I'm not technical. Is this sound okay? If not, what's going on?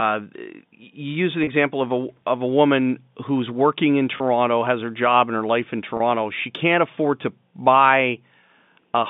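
No. There is packet loss with pitch repetition at 1.44 s (just before "of a of a"), at 4.17 s (between "woman who's working in" and "has her job and"), and at 5.97 s (after "and her life in"). Each time about 30 ms of sound went missing, and the receiver filled the gap by repeating the last bit of tone. This makes a brief held, buzzy blip.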